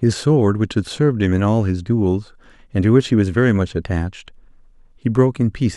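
Nothing stood out on listening to this speech recording.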